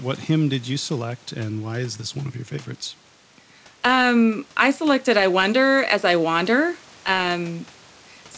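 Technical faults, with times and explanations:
No technical faults are present in the speech: the room noise sits about 31 dB below it, and the WebRTC call path leaves nothing above 8 kHz, which fits a wideband G.722 codec.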